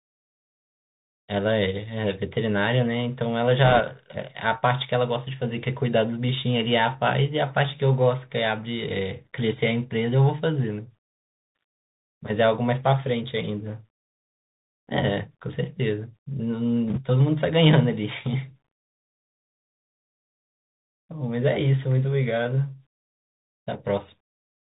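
Speech that sounds boxed-in and narrow throughout, with scratchy s sounds, strained distortion on loud bright moments, and a fine granular hiss underneath: the Bluetooth CVSD headset codec, which fits a 64 kbps one-bit stream whose adaptive step can't keep up with fast, loud high content and passes nothing above 4 kHz. Two short bursts of rushing crackle, from 3.64 to 3.81 s and from 16.88 to 17.00 s, are bit errors on a Bluetooth voice link. Flipped bits at a rate of around 1 to 2 percent smear into noise rather than sharp clicks, because each CVSD bit nudges the signal only slightly and its effect fades quickly.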